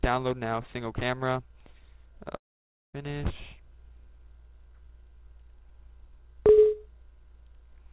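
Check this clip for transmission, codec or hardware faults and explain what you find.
One fault shows up, over the band-limited call-path sound that stops at 4 kHz, consistent with narrowband G.711 telephony. From 2.36 to 2.95 s there is a long network dropout, most likely about 580 ms of packets failing to arrive. The receiver stretches the last sound into a fading buzz or hiss, which gives way to silence for most of the stretch. The sound then resumes with that portion lost.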